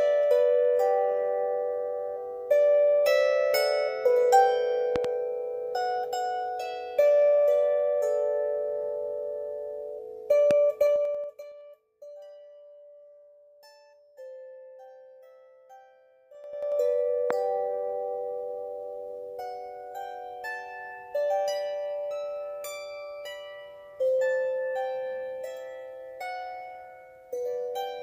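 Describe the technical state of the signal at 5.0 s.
A loud pop lands between 4.96 and 5.07 s: two sharp pops around 15 dB above the sound, likely a voltage spike from a plug, switch or static.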